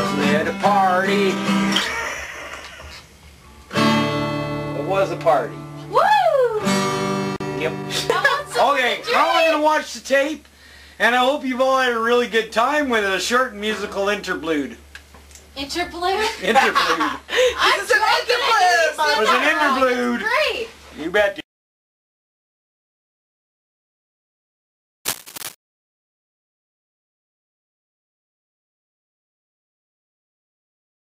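At 25.05 s there's about half a second of cable scratch noise, a rustly crackle, most likely a worn cable or connector being nudged.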